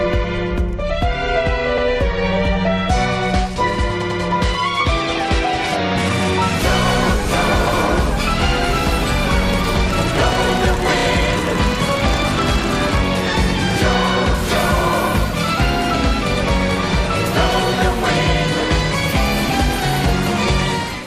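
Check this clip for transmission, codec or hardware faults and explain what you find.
There are repeated frames at 1.78–1.87 s, 4.02–4.21 s and 10.99–11.06 s. Blocks of compressed frames were delivered more than once, so the decoder replays them. A 96 ms block replays once, then twice, and a 32 ms block replays twice, each a stutter.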